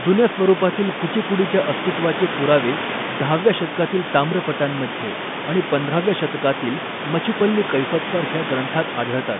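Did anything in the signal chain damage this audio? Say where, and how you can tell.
Yes, at the codec stage: the Bluetooth CVSD headset codec's one-bit step tracking leaves scratchy s sounds and granular hiss throughout, and the spectrogram shows only 150 Hz to 3.6 kHz.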